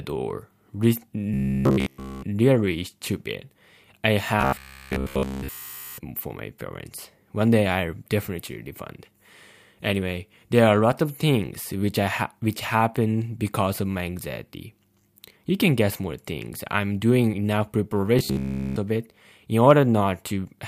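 From 1.34 to 2.22 s, 4.41 to 5.98 s (between "stupid I" and "for my parents") and 18.19 to 18.76 s (before "of it in"), the speech becomes a fixed 66.8 Hz metallic buzz. This robotic sound from repeated short buffers is likely caused by a 15 ms slice looping in place of audio that was skipped. Unlike dropouts, it never falls silent.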